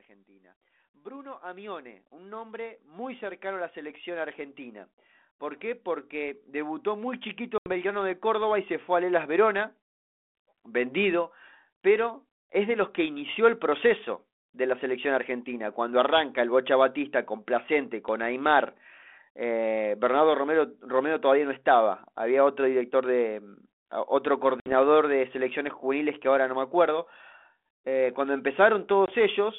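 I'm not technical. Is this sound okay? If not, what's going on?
No. From 0.06 to 10.94 s, the automatic gain control decided the input was too quiet and kept turning it up. The voice and background noise swell louder together over those first eleven seconds rather than holding steady.

There are also three moments of packet loss on an ADPCM call, on this telephone-quality line. Chunks of audio went missing in transit. At 7.58 s about 80 ms drops out, at 24.6 s about 60 ms between "otro director de otro" and "de selecciones juveniles que", and at 29.06 s a brief gap. Each gap is a sudden hole of silence. Because the decoder loses track of the sound it was rebuilding, the speech comes back slightly distorted before settling.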